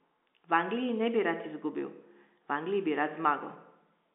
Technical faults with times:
none

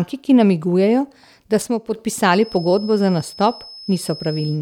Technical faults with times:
1.62-1.95 one channel drops out
2.35-4.61 feedback whistle

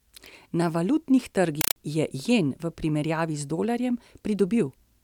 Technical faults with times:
1.61-1.76 compressed stream played as audio

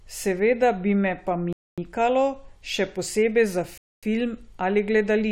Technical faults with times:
1.53-1.78 gap between chunks
3.78-4.03 gap between chunks

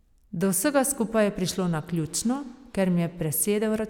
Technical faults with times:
none

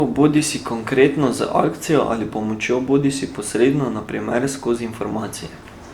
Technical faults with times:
0.00-5.94 generation loss

